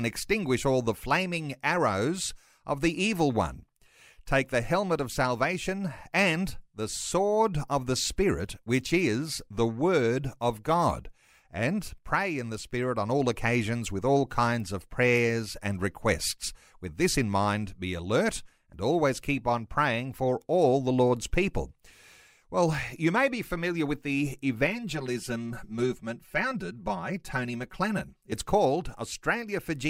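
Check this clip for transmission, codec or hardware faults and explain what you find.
One fault stands out, after "be familiar with the": channel delay (comb filtering) from 24.67 to 28.32 s. One channel lags by roughly 5 ms and is summed with the other, cancelling evenly spaced frequencies from about 100 Hz upward. The speech turns hollow and phasey. Unlike flanging, the notches stay fixed rather than sweeping.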